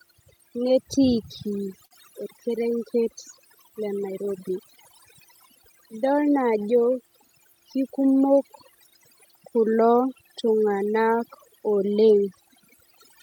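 Speech clip with overdone noise removal throughout: the background collapses to near silence dotted with twinkling specks, unlike broadband hiss or plain low-pass dullness. Clock drift between sender and receiver also runs the whole way, with the sender's clock running roughly 4 percent slow, so the receiver's buffer keeps draining rather than overflowing. This produces repeated timing corrections from 0.24 to 13.15 s, always stretching, playing at about 97 percent speed and adding nearly half a second in total. These are heard as slight hiccups and an unsteady, dragging tempo, not abrupt dropouts. Scattered short gaps appear from 0.13 to 3.39 s, where a handful of holes, the longest a few tens of milliseconds, were patched by continuing the previous sound into brief smears. From 5.35 to 8.10 s, about five much smaller holes, each only a few milliseconds long, come through as tiny ticks. 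Unlike the drift corrections, these gaps are isolated and confined to those two stretches rather than spread evenly through the clip.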